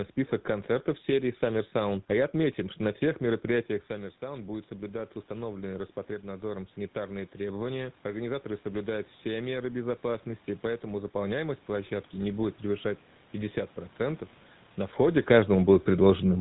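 From start to finish the speech has the buzzy, gravelly texture of the GSM full-rate codec. Its pulse-driven excitation keeps only every third sample of the excitation, which fits a 13 kbps stream, and nothing gets through above about 3.9 kHz, so everything sounds rough and boxed-in.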